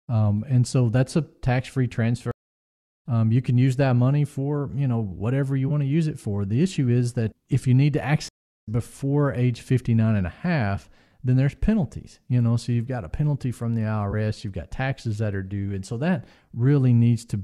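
Speech with two stream reconnects, at 2.31–3.06 s (0.7 s gap, resuming about half a second later) and 8.29–8.68 s (0.35 s gap, about 0.2 s later): flat-line silence, then abruptly shifted content.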